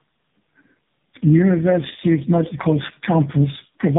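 Tandem speech coding runs through the whole clip: the speech sounds like it crossed three low-rate speech codecs in a row, likely G.729A, GSM full rate and finally AMR-NB. Each re-encoded the previous one's damage, leaving rough, warbly, muffled speech with nothing above 3.8 kHz.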